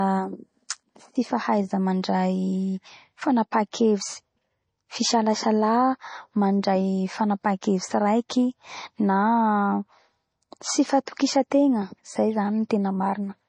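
From the start, the speech has a dull, watery quality. This is likely MP3 compression. Nothing is heard above about 9.3 kHz. The encoder has cut the treble at a fixed point to save bits. Weak frequency lines drop in and out between frames. That gives a swirly, metallic edge to s sounds, and onsets smear. The damage is plainly audible throughout. It fits a low bitrate, around 32 kbps.

At 8.29 s there is pre-echo. A brief hiss arrives just before a sharp attack. It spreads about 11 ms ahead of it. The codec shares its quantisation noise across a whole block. Here the attack fell late in that block. Noise sized for the loud part leaked into the quiet moment before it. The attack itself sounds softened and smeared.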